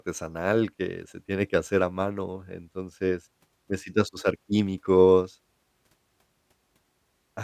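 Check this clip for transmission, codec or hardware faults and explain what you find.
Nothing turned up here: no transmission, codec or hardware faults could be heard in the recording.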